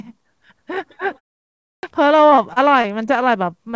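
The speech in this clip has three faults on top of a call path band-limited to nothing above 8 kHz, which fits G.722 at 64 kbps. First, a clipped start after a pause at 1.61 to 1.83 s. After about half a second of silence, roughly 220 ms of the returning sound is missing, so it begins abruptly mid-onset while the output device wakes or relocks. That lost onset sets it apart from muted pauses, where the background fades out but the next sound returns intact. Second, repeated packet loss gives a choppy, robotic stretch from 2.30 to 3.09 s. Five separate gaps, the longest 24 ms, were each patched by extending the preceding sound, leaving about 12 percent of that span synthetic. The quick recurrence of these patches distinguishes it from a single isolated dropout. Third, a short concealed packet loss at 3.71 to 3.75 s. A 20 ms hole was filled by continuing the last sound and blending back, adding a few milliseconds of timing slip. 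It is heard as one brief smear at the very end rather than the sustained warbling of the earlier stretch.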